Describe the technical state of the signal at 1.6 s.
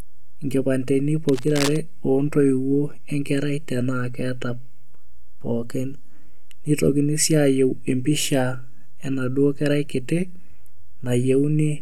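A scratchy, rustling burst sits over the speech from 1.28 to 1.77 s, about 10 dB below it: cable scratch noise, likely from a worn connector shifting contact.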